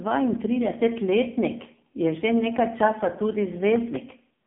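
Across the whole speech clip runs the AMR narrowband mobile codec: nothing above 3.7 kHz, a line band of 150 Hz to 3.6 kHz, and heavy buzzy, synthetic coloring from too few pulses per frame, which fits a low rate near 5.9 kbps. Simple telephone band-limiting would sound muffled but clean, without that buzz.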